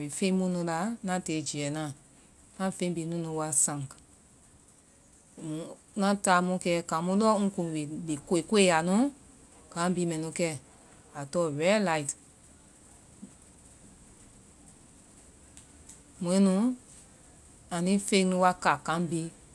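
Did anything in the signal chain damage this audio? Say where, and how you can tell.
No, nothing along the chain from capture to playback seems to have harmed this speech recording, so there's no stage to point to and nothing to time.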